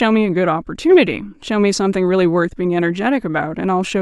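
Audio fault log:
Nothing stood out on listening to this speech recording.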